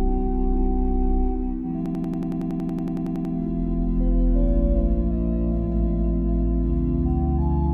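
From 1.86 to 3.34 s the sound turns into a rapid machine-gun stutter: one 93 ms fragment repeats exactly, about 16 times, at 10.8 Hz. This is a system hang loop. The system froze while the audio hardware kept replaying its ring buffer, which fits a 4096-sample buffer.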